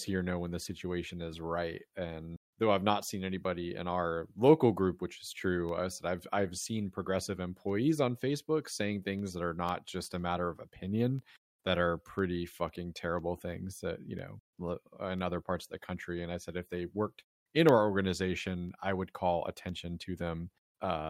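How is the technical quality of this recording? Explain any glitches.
The recording has one recurring glitch. Periodic USB or driver dropouts run from 5.19 s to 20.70 s, with about thirty events spaced every 0.5 s. Each time, something blocks the audio path and a fraction of a millisecond of speech drops to silence, leaving a regular tick that sounds only while someone is talking.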